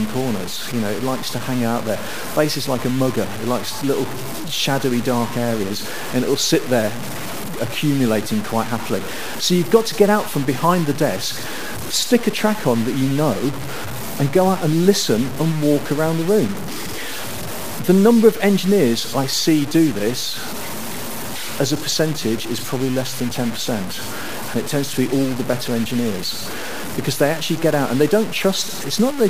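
From start to finish the sound is grainy and gritty. Quiet passages sputter. This is likely low bit depth without dither, fitting 5-bit truncation, with error noise about 15 dB below the signal.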